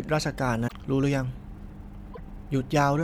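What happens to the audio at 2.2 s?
At 2.2 s the speech comes out of a brief burst of damaged data in the compressed stream, running from 2.10 to 2.20 s. Corrupted bytes there make the decoder misread its frames and lose sync until it finds a valid header, producing a short chirp or squawk.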